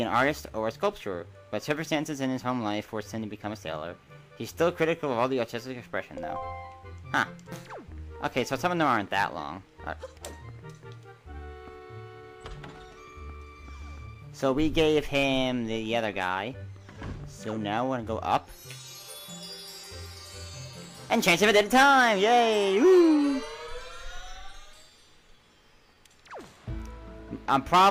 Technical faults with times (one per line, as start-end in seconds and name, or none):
0.00-27.91 clock drift between sender and receiver
0.50-27.83 repeated timing corrections